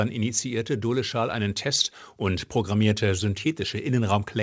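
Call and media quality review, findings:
No faults found; audio band-limited at 8 kHz.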